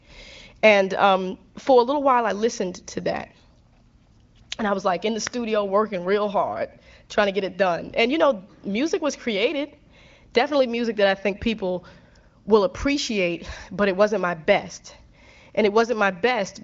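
No technical faults can be heard in the speech. It is carried by the AMR wideband (HD Voice) codec, with content reaching about 7 kHz and nothing above, and the codec's effect on the sound is faint at most, which points to one of its higher bitrates.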